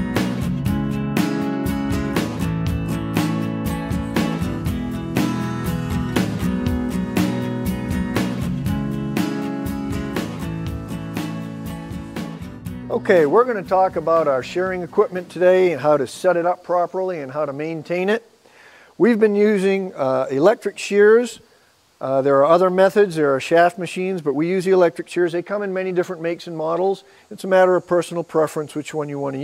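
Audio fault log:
No faults heard in this clip.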